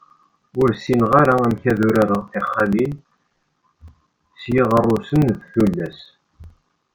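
From 0.10 s to 6.89 s, a background task keeps stalling the USB bus or audio driver every 64 ms, causing periodic USB or driver dropouts. Each stall loses roughly 4 ms of audio, and silence fills the gap. Across the speech this makes around a hundred evenly spaced ticks, about 16 per second, forming a steady clicking that rides along with the voice and vanishes in the pauses between phrases.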